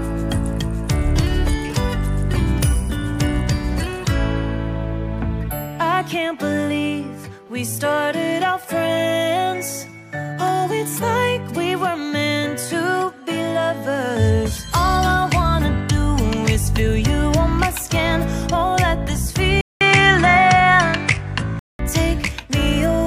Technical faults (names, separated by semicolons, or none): input switched to a poorer device